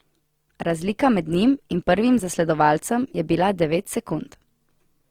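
A speech clip with audible compression damage throughout, most likely Opus compression in its music-style CELT mode, at a rate that fits roughly 24 kbps. The band energy stays intact and the full bandwidth survives, with content reaching about 20.2 kHz, but the fine detail is replaced by folded or noise-filled bands, so the sound turns grainy and rough. That texture separates it from MP3, which would leave spectral holes and a swirling, watery quality.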